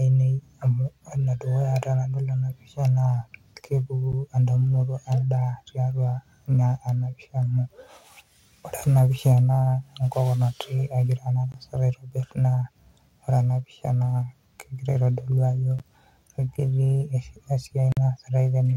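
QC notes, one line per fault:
4.12 s, 11.52–11.54 s, 15.79 s and 17.92–17.97 s, block of digital silence: the audio drops straight to zero and snaps back with no fade. The two at 4.12 and 15.79 s last about 12 ms, which fits a 512-sample buffer that wasn't filled in time, and they come across as ticks. The 20 ms one at 11.52 s is more of a pop. The 46 ms gap at 17.92 s, which fits a 2048-sample block, is long enough to hear as a short hole in the speech.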